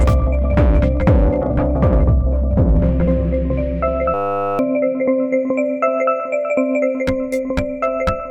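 At 4.14 s the music collapses into a system hang loop: the computer or its driver stalled, and the sound hardware kept replaying one 10 ms slice of its buffer, which points to a very small ring buffer. Forty-five identical repeats at 100 Hz form a steady buzz lasting until 4.59 s, and roughly half a second of music is lost. Unlike a dropout, which leaves silence, or a stutter of longer, uneven fragments, this is a pitched drone from exact copies.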